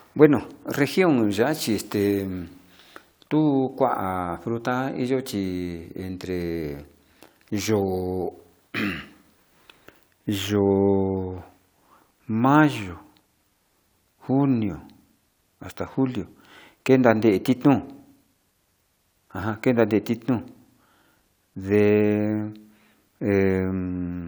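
No technical faults are audible anywhere in the speech recording.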